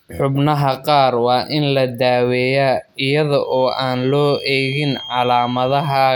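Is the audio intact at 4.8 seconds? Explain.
No. From about 3.40 s to the end there's a feedback whistle, a thin, steady tone near 3.2 kHz sitting well below the speech and wavering a bit. The likely cause is a speaker-to-mic loop hovering right at the edge of feedback.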